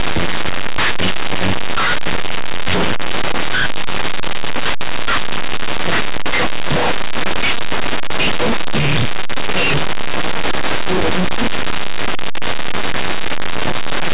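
Linear 8-bit samples from this speech recording are being decoded as though they were mu-law codes, a case of linear audio read as companded. Small values just to one side of zero expand into the largest outputs, so the whole clip sounds very loud, harsh and distorted.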